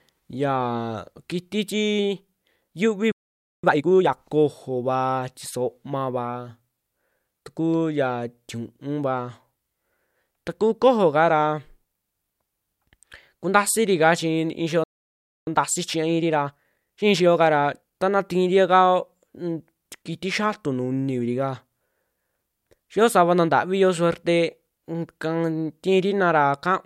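At 3.12 s and again at 14.84 s the speech halts in a playback stall, silent for 0.52 s and 0.63 s, likely because the player ran short of data. Unlike a brief dropout, each gap lasts a noticeable time. Each stall is followed by time-compressed catch-up, with the speech hurried at 2× from 3.64 to 4.14 s and at 1.25× from 15.47 to 17.99 s. The pitch stays normal, so it is not a plain speed-up.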